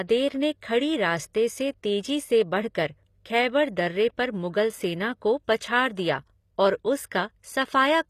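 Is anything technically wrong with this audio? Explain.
Yes. Throughout the speech, the audio was likely encoded with HE-AAC at a low bitrate, in the range of 24 kbps. That codec keeps only the lower band and synthesizes the treble by copying lower bands upward under a coarse envelope, so the top end is an approximation whose harmonics don't line up with those below. The damage is plainly audible: s sounds come out gritty and lispy, and nothing survives above 14.9 kHz.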